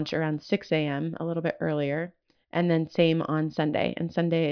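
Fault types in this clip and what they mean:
No technical faults can be heard in the speech: the signal keeps steady level and continuity throughout, with nothing added to or taken away from it.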